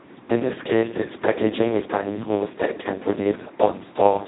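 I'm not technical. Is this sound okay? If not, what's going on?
No. The speech went through the Speex codec, an older voice-compression method from internet calls and game chat, set to a very low quality. At that setting it has too little data to rebuild the voice faithfully, so from start to finish the speech sounds heavily damaged: noisy, hoarse and somewhat robotic. Everything above about 3.9 kHz is gone, which makes the voice sound dull and muffled, like an old phone line.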